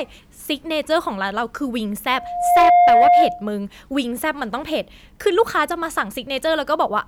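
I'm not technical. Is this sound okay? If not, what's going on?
No. From 2.10 to 3.48 s there is loudspeaker feedback squeal. The microphone picks up its own loudspeaker, and one pitch, about 707 Hz, loops round and grows. It swells over roughly half a second into a steady whistle, much louder than the speech.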